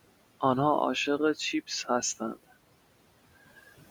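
Throughout, noise suppressor artifacts are audible: the room noise, about 20 dB below the speech, drops by about 18 dB between phrases and rises under them, leaving a residue rather than the full silence of a gate.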